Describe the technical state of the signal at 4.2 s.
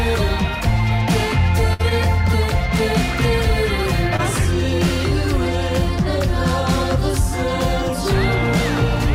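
A brief smear or wobble sits at 4.16 to 4.20 s, where the sound blurs for a moment. This is short concealed packet loss: about 20 ms of audio arrived too late, so the decoder extended the preceding sound for 22 ms before blending back in.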